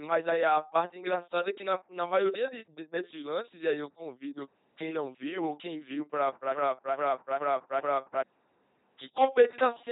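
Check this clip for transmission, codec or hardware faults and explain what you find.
Two faults are audible: a heavily vocoded sound across the whole clip, and a stuck loop near the end.

Throughout, the speech has a buzzing, mechanical, robotic quality, with stray buzz or hiss where voiced and unvoiced sounds are misjudged, and nothing above 3.8 kHz. This is the LPC-10 vocoder at 2.4 kbit/s, which rebuilds each moment from a pulse train or noise through a ten-pole vocal tract filter.

From 6.54 to 8.24 s, just after "ou quem viu para", a 424 ms fragment repeats exactly four times back to back, like a broken-record loop, and the speech meant for that stretch is gone. The likely cause is a stalled player or stream resending its last buffered piece.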